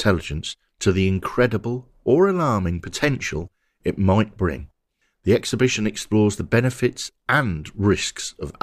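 No technical faults can be heard anywhere in this clip.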